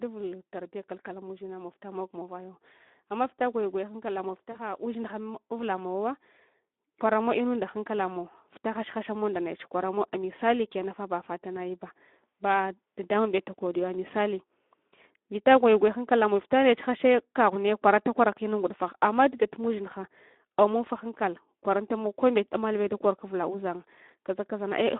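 Throughout the clip the speech carries plainly audible Speex codec damage. The excitation is starved of bits, so the voice sounds hoarse and grainy, and the coarseness fits a setting around 11 kbps. On a spectrogram the energy sits in a band from 200 Hz to 3.6 kHz with nothing above, and the harmonics look smeared and noisy rather than crisp.

From 4.52 to 4.59 s, just after "gwayu gwaya hankala mow", there is VoIP packet loss concealed by the speech codec. About 40 ms of audio went missing, which fits two lost frames. The decoder kept repeating its last pitch and filter at falling gain, so the speech is stretched into a short sound that fades. The waveform shows a shrinking stretch. The spectrogram shows it dimming before normal structure returns.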